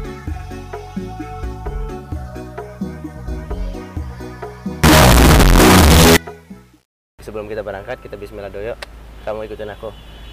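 From 4.84 to 6.17 s the sound breaks into a blast of very loud, harsh distortion, with quiet moments as loud as everything else. The likely cause is signed and unsigned mixed up in the 8-bit samples, so the top bit is flipped and every zero crossing jumps across the full range. On a waveform the section stands out as a near-solid block; a spectrogram shows dense broadband energy up to the top.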